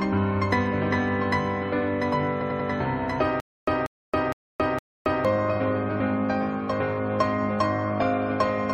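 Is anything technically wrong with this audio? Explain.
Yes. There are three faults.

A doubled audio track runs through the whole clip. A second full-band copy trails the original by about 1.5 s, roughly 5 dB quieter. It has no reverb or room colour. A slower second capture path is the likely cause.

Repeated frames occur from 2.40 to 2.68 s. A 92.9 ms block plays three extra times, which fits a short run of compressed frames being written or sent again. It sounds like a stutter. The repeats add 0.28 s.

A stutter with silent gaps runs from 3.40 to 5.25 s. A 0.19 s burst returns four times, separated by 0.27 s of digital silence, at a steady 0.46 s period. The audio meant for that stretch is missing. A stalled player retrying its last fragment is the likely cause.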